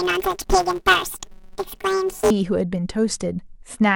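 From 0.0 to 2.31 s, planar audio read as interleaved: 5.33 ms blocks replay at double speed, giving a robotic buzz near 188 Hz, visible as evenly spaced vertical striations on a spectrogram.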